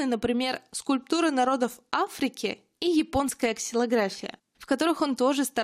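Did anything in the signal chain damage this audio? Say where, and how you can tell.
No, nothing in the chain has damaged this speech recording. I can't point to any moment where a stage between capture and playback has left an audible mark on the sound.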